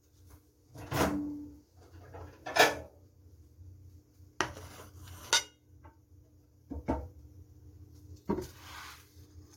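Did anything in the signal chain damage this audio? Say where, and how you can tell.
Yes, at about 1.53 s there's a short blip, typical of damaged data in a compressed stream. Corrupted bytes at the codec stage made the decoder misread a frame, lose sync and hunt for the next header, so the sound glitches briefly before carrying on.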